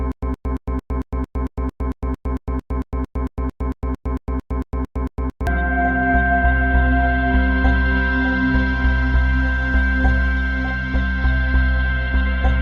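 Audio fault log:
0.00–5.47 s, stutter with silent gaps: already under way when the clip opens, a 117 ms burst of sound plays, drops to about 108 ms of digital silence, then returns identically, cycling every 225 ms for 24 repeats. The likely cause is a stalled player or stream that, on each retry, replayed its last buffered fragment before running dry again. That produces the even, mechanical pulse, and the audio due during those 5.47 s never arrives.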